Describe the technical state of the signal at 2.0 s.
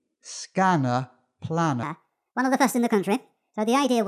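At 2.0 s the signal is inside a wrong sample rate fault running from 1.83 s to the end of the clip at 4.07 s. The samples are being clocked out faster than they were captured, with no rate conversion, which fits audio recorded at 22 kHz being played at 32 kHz. Speed and pitch therefore rise together: the speech runs about 1.45 times too fast and sits roughly 6.5 semitones high, sounding hurried and squeaky.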